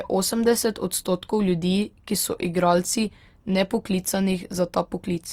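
Throughout, the speech sounds grainy and rough. Tones turn noisy. This points to likely Opus compression in music mode, near 24 kbps.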